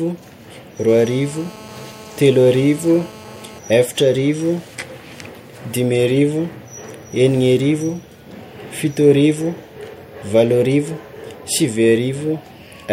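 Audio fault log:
0.89–3.59 s, GSM phone buzz: a hard, raspy buzz sits under the speech at about 22 dB below it. It is pitched at 217 Hz, thick with harmonics, and unrelated to anything in the speech. It holds steady for its whole span, the pattern of a nearby 2G handset on an active call. That phone's transmitter fires bursts 217 times a second, and the audio circuitry rectifies those radio pulses into an audible tone.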